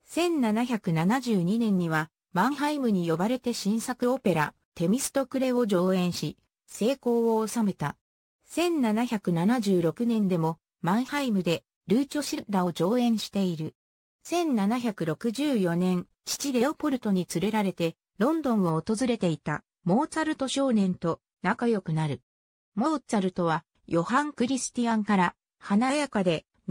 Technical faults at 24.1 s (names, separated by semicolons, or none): none